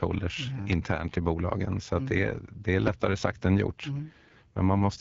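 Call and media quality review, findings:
AMR wideband (HD Voice) codec damage, throughout: speech rough and raspy, consistent with a low rate near 8.85 kbit/s; nothing above about 7.4 kHz, top band noise-filled.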